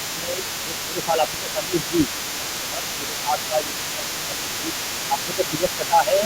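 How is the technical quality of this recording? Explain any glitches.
The recording is compromised by echo-control problems throughout, with two distinct faults working against each other.

Speech suppressed in double talk occurs from 0 to 0.47 s, 0.65 to 1.98 s, 2.25 to 4.74 s and 5.09 to 6.24 s. This is likely an echo canceller that heard both ends at once, failed to tell the talker apart from loudspeaker echo, and pulled the whole signal down. The talker's speech repeatedly sinks by roughly 10 dB, sounding duller and partly broken during those spans.

The other side's voice leaking through runs across the entire clip, from 0 to 6.25 s. Most likely the far end is playing on a loudspeaker, and the echo canceller is leaving part of that sound in the microphone path. The result is a second voice sitting about 10 dB under the main speech, heard as a quieter layer.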